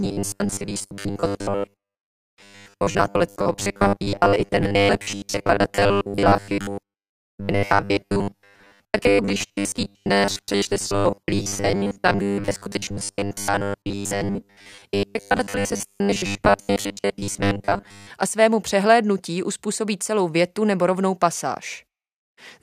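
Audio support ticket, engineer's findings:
Robotic sound from repeated short buffers, 0.01 to 18.1 s, clears before "a svému přehlédnutí uspůsobí". Rigid, metallic 100 Hz buzz over the speech. Likely cause: audio arriving too seldom at the playback buffer. Gaps filled by repeating the last 10 ms, most of the signal replayed and real audio skipped.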